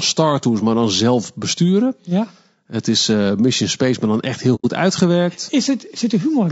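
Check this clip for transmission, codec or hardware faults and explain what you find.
The clip has two faults: codec damage throughout and one short dropout.

Throughout the speech there is plainly audible low-delay AAC compression, likely AAC-ELD at a low rate, which fits about 32 kbps. Its short frames resolve pitch harmonics poorly, so the voice sounds rough and grainy. On a spectrogram, noise fills the gaps between the harmonic lines.

From 4.55 to 4.65 s, just after "maar dan echt heel", AAC frame loss with muting leaves a gap of about 90 ms, which fits three lost frames. The decoder zeroed their spectrum, and the overlapping windows fade the sound out and back in. The waveform shows a soft-edged hole, and the spectrogram a blank vertical band.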